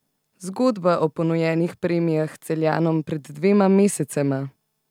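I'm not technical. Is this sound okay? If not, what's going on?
Yes, no faults heard.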